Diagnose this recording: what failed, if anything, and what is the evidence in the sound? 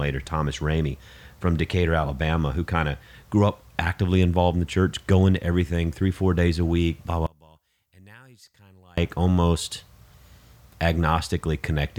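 From 7.27 to 8.98 s the speech drops by about 31 dB to a faint residue before returning at full level. The likely cause is one channel inverted in the analogue wiring: reversed polarity cancels the shared centre content on mono summing.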